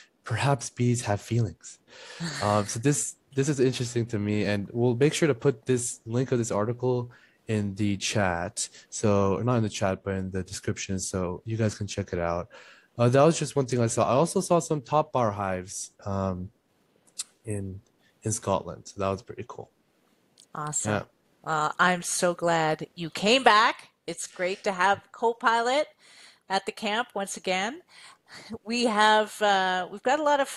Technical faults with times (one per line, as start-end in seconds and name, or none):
0.12-30.54 clock slip clicks